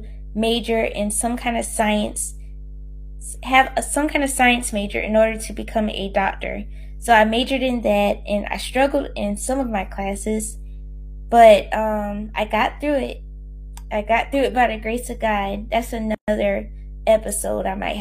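Mains hum runs through the whole speech clip as a steady 50 Hz tone with low harmonics, sitting fairly high at roughly 15 dB below the speech, the kind of coupling a ground loop or nearby transformer puts onto the line. A gap at a join of encoded pieces opens from 16.15 to 16.28 s: a gap of about 134 ms with smeared edges, after which the speech resumes where it stopped, as when separately encoded segments are joined without trimming the encoder delay and final-frame padding.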